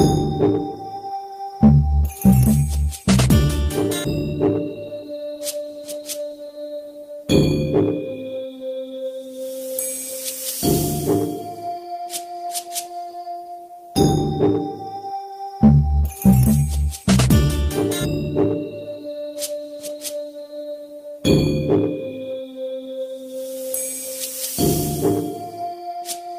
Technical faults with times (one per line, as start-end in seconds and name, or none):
none